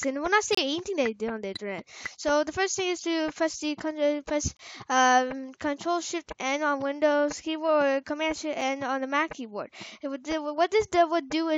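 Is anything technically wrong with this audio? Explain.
Yes. There are gaps between stream segments at 0.55–0.57 s, 4.57–4.59 s and 8.61 s, spaced 4 s apart. Segment timestamps leave small holes that play as silence, about 28, 24 and 4 ms long, with hard edges. On a waveform they appear as flat dropouts, and on a spectrogram as thin vertical blank stripes.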